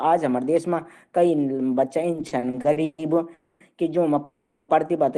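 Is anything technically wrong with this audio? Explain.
Yes. The audio has two kinds of network timing fault, heard through a call codec whose coding fits Opus at around 20 kbps, with the top of the band ending near 12 kHz.

Repeated stalls (stutter) run from 2.11 to 3.01 s. Packets kept reaching the receiver late, so its jitter buffer emptied nine separate times. Each time, the receiver stretched the last bit of sound to cover the wait, for 350 ms in total. The longest single hold was 140 ms, and roughly two-fifths of that stretch is filler. Nothing is lost, but the speech drags and hiccups along in short, uneven catches.

Call audio freezes occur at 3.34 to 3.63 s and at 4.24 to 4.71 s. In each, the speech halts and the last sound is drawn out as a buzzy, fading tail. It never drops to silence. Then the speech resumes exactly where it stopped, with nothing skipped. The first hold lasts 260 ms and the second 440 ms. 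This is likely a burst of delayed packets draining the jitter buffer, which pushes everything after it later by the length of each hold.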